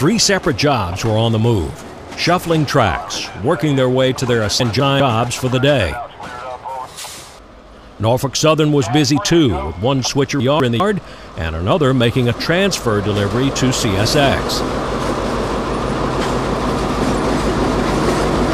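Two brief jumbled spots turn up, at 4.6 to 5.0 s and again at 10.4 to 10.8 s. They're chunks out of order: a 200 ms block lands one chunk late and swaps places with its neighbour, so nothing is lost but the sequence is scrambled, with hard joins at the seams.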